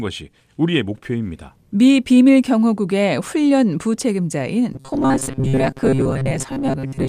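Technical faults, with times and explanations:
4.73 to 7.08 s, robotic sound from repeated short buffers: audio likely arrived too seldom, so a 7.5 ms chunk looped most of the time, imposing a rigid, metallic 133 Hz buzz on the speech.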